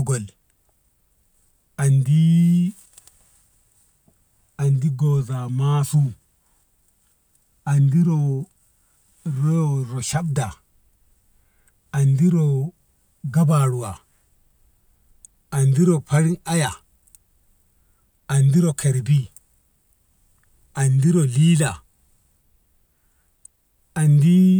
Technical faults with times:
none

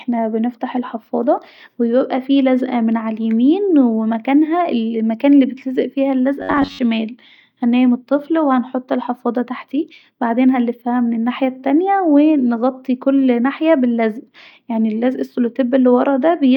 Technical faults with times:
6.40-6.79 robotic sound from repeated short buffers

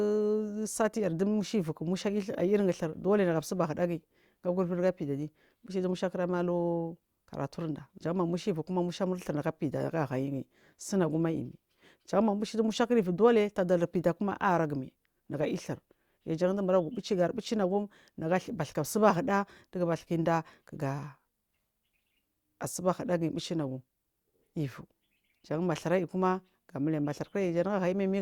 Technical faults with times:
none

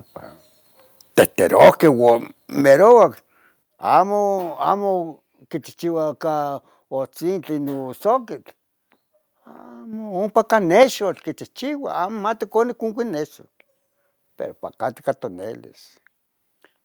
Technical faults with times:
1.56-2.10 microphone overload
1.62 microphone volume stepped down
2.61 microphone volume stepped down
2.69-3.04 microphone overload
3.63 microphone volume stepped down
9.93 microphone volume stepped up
10.83 microphone volume stepped down

